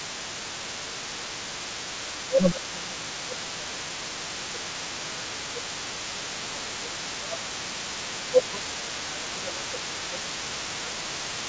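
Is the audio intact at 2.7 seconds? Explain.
No. At 2.7 s the talker's speech dips by up to around 15 dB, within a stretch of speech suppressed in double talk from 1.97 to 7.78 s. The likely cause is the echo canceller turning everything down while both sides spoke at once. Underneath, a faint second voice about 15 dB below the talker runs through the whole clip. That is the other side's voice leaking through, likely loudspeaker echo the canceller failed to remove.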